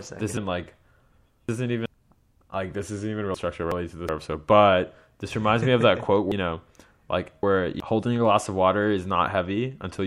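Chunks out of order jumble the speech at 0.37–1.86 s, 3.34–4.09 s after "like this isn't even" (before "our episode but this"), and 6.32–7.80 s before "holding a glass of". A 0.37 s block plays three chunks late, or one chunk late in the middle case, leaving three hard joins. Unlike a dropout, nothing is lost; only the order is wrong.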